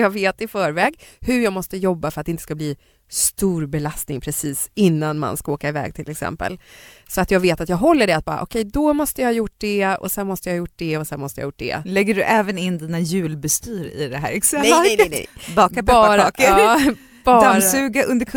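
No technical faults can be heard anywhere in the recording; the signal holds steady throughout without any break, glitch or change in its character.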